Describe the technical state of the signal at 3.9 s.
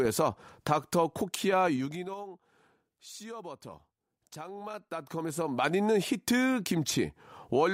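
At 3.9 s the speech signal is intact, with no technical fault at that moment.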